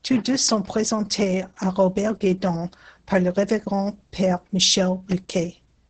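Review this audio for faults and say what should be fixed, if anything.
Opus voice compression affects the speech from start to finish. Nothing is heard above about 8.8 kHz, which fits the coder's wideband limit. The excitation is coded coarsely, so the speech sounds muffled, hoarse and slightly robotic. The damage is heavy and fits a bitrate near 10 kbps. Encoding at a higher bitrate would prevent this.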